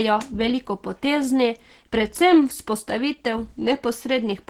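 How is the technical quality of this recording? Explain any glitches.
The recording has one fault, plainly audible codec damage present from start to finish. It is likely Opus compression, and the sound points to a low rate of around 16 kbps with the encoder in its hybrid speech mode. At that rate the codec fills starved frequency bands with folded or noise-like content, so the speech comes out hoarse, grainy and muffled. It lacks the watery swirl and spectral gaps of MP3, and the bandwidth stays fullband, reaching about 20.1 kHz.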